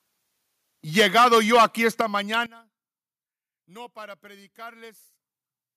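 From 0.98 to 2.01 s the loudest speech syllables turn harsh and crackly, with peaks about 9 dB beyond full scale. This is microphone overload, likely from input volume set too high for the converter. On the waveform, several percent of samples have their tops flattened off, and the spectrogram shows broadband splatter above each peak.

Within that stretch, at 1.0 s, everything drops about 2 dB at once, and at 2.01 s it drops again by about 7 dB, just as the distortion stops. Both are microphone volume stepped down, likely call software reacting to the clipping by lowering the device gain. The waveform envelope shows a clean downward step each time.

At 2.34 s a sharp snap cuts across the sound, an electrical switching spike, likely a nearby switch or static discharge arcing into the audio line. It appears as a thin vertical stripe across all frequencies on the spectrogram and a spike on the waveform.

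From 2.46 s to the end, the speech collapses about 19 dB into a faint residue. One channel inverted is the likely cause: summing to mono cancels everything common to both sides. The waveform shrinks sharply.

At 5.13 s the level jumps up about 4 dB as the call software raises the input gain. This is microphone volume stepped up, visible on the waveform as an abrupt upward step in the envelope.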